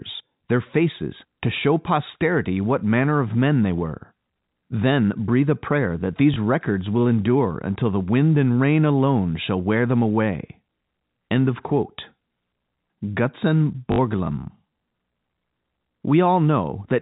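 A speech clip carried over G.711 telephone coding, with everything above 4 kHz absent, has a small blip and a brief robotic stutter. At 6.34 s, between "breathe a prayer that" and "records will endure until", a 20 ms fragment replays. At 13.92 to 13.98 s a 60 ms run buzzes at about 50 Hz, consistent with three lost 20 ms packets. This is packet loss with the last packet repeated, where the receiver replays the previous packet out of step with the pitch.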